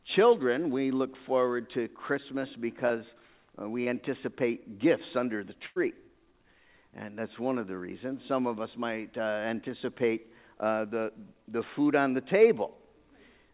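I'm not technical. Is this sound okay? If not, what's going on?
No, there are a few small dropouts where bits of the sound got lost on the way through the call.

The first kind is short concealed packet loss, at 2.88 to 2.92 s and again at 3.84 to 3.88 s. Each time a tiny chunk of audio arrived too late, so the receiving end stretched out whatever it was just playing to cover the gap, then slid back into the real sound. You'd hear it as a quick smear or little wobble.

The bigger one is a burst of packet loss, at 5.66 to 5.78 s. This time about a tenth of a second went missing in one go. The receiver again kept the last bit of sound going but let it fade as the gap dragged on, so you get a brief held buzz or fading hiss, and then the audio picks up a little further along, with that slice simply gone.

All of this rides on a phone-style call line that trims off the top end, which is why the whole thing has that slightly muffled, telephone feel.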